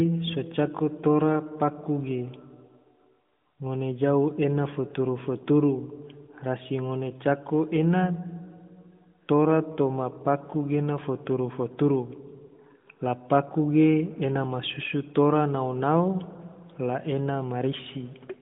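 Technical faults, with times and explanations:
No technical faults are present.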